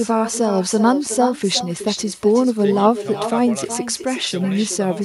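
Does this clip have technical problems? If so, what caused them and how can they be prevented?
Yes. Echo with no canceller runs throughout the speech: each phrase returns roughly 0.4 s later as a thinner copy about 11 dB down, because the far end's loudspeaker feeds its microphone and that signal travels back unremoved. Enabling acoustic echo cancellation or using headphones at the far end prevents it.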